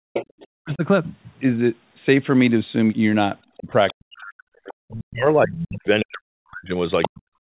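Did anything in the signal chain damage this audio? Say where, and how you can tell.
Yes. The damage happens in call processing, in the echo canceller. From 0.0 to 0.13 s the room background is gated by the echo canceller. The ambient sound drops sharply, by about 40 dB at its deepest, then comes back. The whole dip lasts only a brief moment. The canceller saw loudspeaker signal and clamped the microphone path hard. It released once it judged the echo gone, so the background returns.

A second voice, the other side leaking through, can be heard under the speech. It sits at 0.13 to 0.75 s, about 10 dB below the talker. It returns at 3.88 to 4.92 s, about 20 dB down, and at 5.56 to 6.05 s, about 10 dB down. A short burst at 7.02 to 7.09 s is only about 5 dB down. This is likely residual echo. The canceller left part of the loudspeaker signal in the microphone feed.

The talker's own speech is pulled down hard twice. 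The first dip runs from 0.6 to 0.83 s, a fraction of a second. The second runs from 3.58 s to the end of the clip. Both drops are deep, around 40 dB. They line up with the leaking voice, so both sides were active at once. The likely cause is speech suppressed in double talk. The canceller could not tell the near talker from the echo and attenuated everything. The hard 4 kHz ceiling fits the G.711 mu-law call codec and is not a fault.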